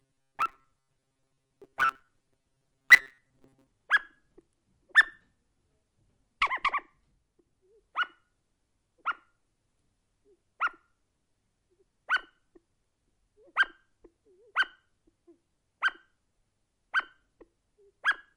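Everyday sounds; from 0.01 to 3.67 s, robotic sound from repeated short buffers imposes a rigid 134 Hz buzz, likely from a roughly 7.5 ms chunk repeating while most of the real audio is skipped.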